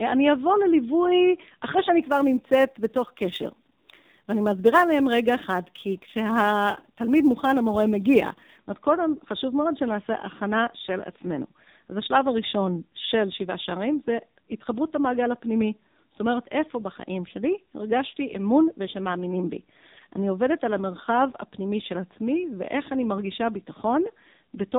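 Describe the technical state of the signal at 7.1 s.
At 7.1 s the speech passes through an AMR narrowband mobile codec, with nothing above 3.8 kHz. The heavy buzzy, synthetic quality suggests a low rate of about 6.7 kbps. Sample clock jitter runs from 2.02 to 8.59 s. Timing errors of a few microseconds add a hiss-like roughness about 35 dB below the signal, strongest on loud, bright sounds.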